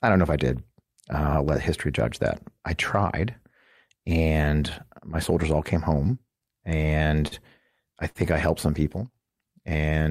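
At 7.27 to 7.34 s and again at 8.09 to 8.18 s, a packet arrived late and the jitter buffer ran dry. Each time, the receiver held the last stretch of speech in place until the packet showed up, padding about 41 ms in the first stall and about 56 ms in the second. Then it resumed exactly where it had stopped. Nothing is lost, but a sound hangs on too long at each point, with a faint buzz or dip as it is held. This is a short stall from a late packet, and it shifts everything after it later by the same amount.

From 9.12 to 9.90 s a jitter buffer slow-down follows. The buffer was short of reserve, so the receiver stretched the signal by repeating single pitch periods and slivers of pause over and over, adding about 55 ms across that span. Speech runs at 94% speed while keeping its pitch, so sounds are drawn out and the delivery feels slightly sluggish.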